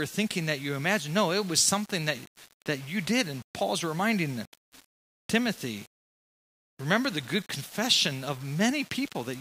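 Low bit depth without dither runs throughout the speech, likely from rounding to about 7 bits, so error tracks the signal, leaving quiet passages gritty and grainy.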